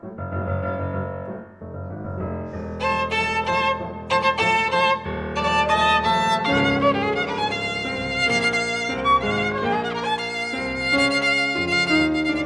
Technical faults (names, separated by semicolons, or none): none